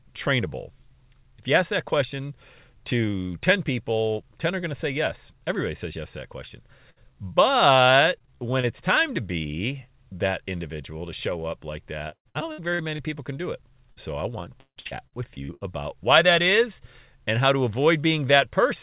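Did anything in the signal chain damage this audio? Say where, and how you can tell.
Yes, the network stage of the call. Short concealed packet loss shows up at 6.48 s (about 20 ms gone) and at 13.92–13.98 s (about 40 ms). Each is a brief smear or wobble where the receiver extended the last sound to cover the hole and then blended back.

There's a burst of packet loss at 6.90–6.98 s, with about 60 ms missing in a row. The decoder kept the last sound going and faded it, so you hear a held buzz or dying hiss before the audio picks up further along.

The worst is repeated packet loss with a robotic sound. At 8.18–8.65 s there are five small gaps, none over 20 ms. At 12.09–13.00 s there are seven gaps totalling about 340 ms, the longest 111 ms. At 14.60–15.63 s there are seven gaps totalling about 420 ms, the longest 155 ms. Constant patching makes it choppy, with pieces gone. The band stopping at 4 kHz fits the G.711 A-law codec itself.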